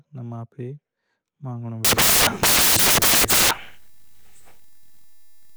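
From 1.85 s to the end of the speech, the audio turns into loud, harsh noise: samples built from the wrong bytes. The reader is assembling each sample with its bytes misaligned or in swapped order, so the rapidly changing low bits land in the high positions and dominate every value. Unlike steady background hiss or clipping, the noise is harsh and broadband.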